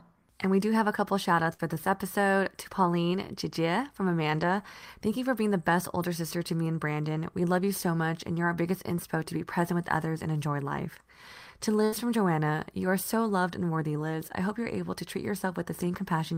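At 1.53 to 1.75 s and again at 11.85 to 11.94 s, a burst of packet loss occurs. The receiver extends the last sound for 54 ms and 75 ms as a fading buzz or hiss rather than silence, then resumes with 60 ms and 80 ms of speech skipped.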